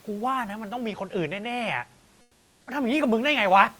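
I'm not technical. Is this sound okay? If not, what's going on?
No. Comfort noise in place of the background, 2.21 to 2.67 s: the room sound turns into a flat, slightly quieter hiss, likely because sending paused during silence.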